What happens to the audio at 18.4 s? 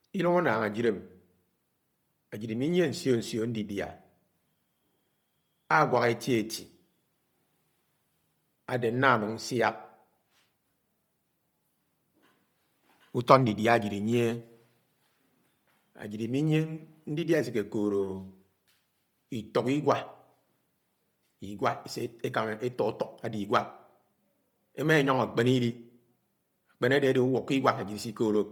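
At 18.4 s the speech has a breathy, grainy edge, with its upper spectrum sounding thin and noisy, as it does across the whole clip. The likely cause is Bluetooth LC3 compression. Heavy coding zeroes much of the upper spectrum and fills it with noise, which fits 10 ms frames at about 32 kbps.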